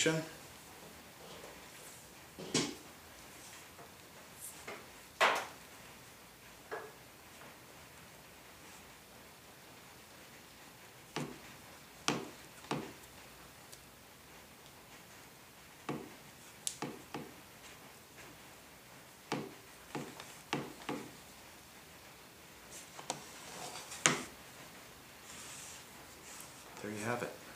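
No technical faults can be heard anywhere in the signal.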